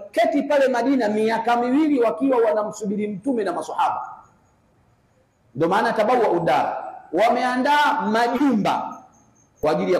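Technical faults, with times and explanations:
1.12–1.14 s, 4.72–4.75 s, 7.29–7.32 s, 8.36–8.41 s and 9.63 s: corrupt frame decoded. Each brief chirp or blip comes from a damaged compressed frame that the decoder played anyway. Misread gains and codes place energy at the wrong frequencies for roughly a frame's length. The blip near 4.7 s is faint, and those near 7.3 s and 8.4 s are loud, peaking around -15 dBFS and -10 dBFS. A spectrogram shows short vertical streaks in unrelated bands, and the waveform shows abrupt bursts.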